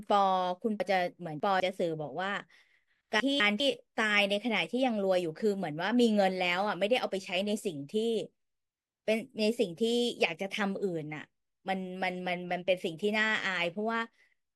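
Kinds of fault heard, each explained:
Chunks out of order: a 200 ms block of the speech plays late, after blocks meant to follow it, so the sound jumps around with hard joins. Between 0.8 and 1.6 s the block lands three blocks late, and between 3.2 and 3.6 s it lands one block late. Unlike a dropout, nothing goes missing, and unlike a stutter, nothing plays twice. All the material is present, just shuffled.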